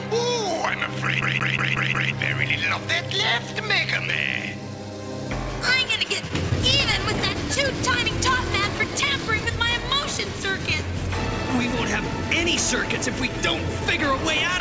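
From 1.22 to 2.13 s the audio falls into a fast, even stutter: the same slice of about 0.18 s plays five times over, with a brief mute at each jump back. This is the CD stuck on one turn pattern. A scratch knocks the laser back one track at the same point on every rotation, so the player keeps rereading that short stretch until it breaks free. Later, between 6.08 and 7.58 s, scattered short gaps appear. There are around seven of them, each no longer than about 10 ms, and they come through as small ticks and smears in otherwise clear sound. Together they cover roughly 70 ms, about 5 percent of that span. They are lost or late packets on a call link, each patched by the receiver carrying the last sound forward, so nothing drops out to silence. The call path itself leaves the whole clip with nothing above 8 kHz, which fits a wideband codec such as G.722.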